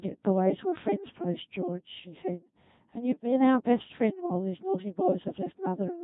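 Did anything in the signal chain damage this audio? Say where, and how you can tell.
Yes. At the codec stage, the whole clip has that robotic, buzzy Codec 2 vocoder sound at 2.4 kbit/s. The speech is rebuilt from sine waves, so the waveform is gone.

On the radio link, bit errors on digital voice radio hit from 3.04 to 3.32 s. Pitch, level and tone lurch into warbly gibberish, which fits about 2 percent of flipped bits corrupting several frames.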